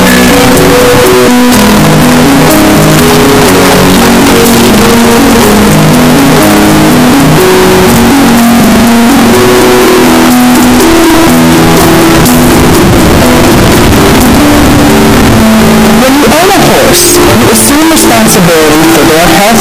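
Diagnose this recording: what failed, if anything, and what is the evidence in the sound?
Sample-format conversion is the failed stage. From the start to the end the sound is a very loud, harsh distortion, and quiet passages come out as loud as everything else. The likely cause is signed and unsigned mixed up on 8-bit samples, so the top bit flips and every zero crossing becomes a jump across the full range. A waveform shows a solid band of large, abrupt swings. A spectrogram shows dense broadband energy through every part.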